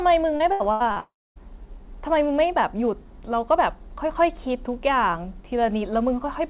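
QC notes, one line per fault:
0.36–0.99 s, repeated packet loss (robotic sound): four short holes, longest 82 ms, each patched by repeating the last sound, giving choppy sound with pieces missing instead of one clean gap.
1.0–1.39 s, long network dropout: sound smears into a fading buzz, then about 260 ms of silence, likely a single extended outage, unlike the brief repeated holes before it.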